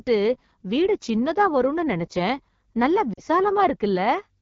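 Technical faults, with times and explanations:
Throughout: AMR wideband (HD Voice) codec. The speech sounds rough and raspy, which fits AMR-WB's 8.85 kbit/s mode, where the coarse pulse excitation cannot match the speech closely. The hiss-like top band above 6.4 kHz, filled with shaped noise, sets it apart from narrowband AMR's duller ceiling.
3.13 to 3.20 s: lost AMR speech frames. For about 40 ms the decoder repeats the last good pitch and vocal tract settings at falling gain, which fits two lost frames. The result is a fade to near silence within the two frames, and the speech returns weak or rough for a moment.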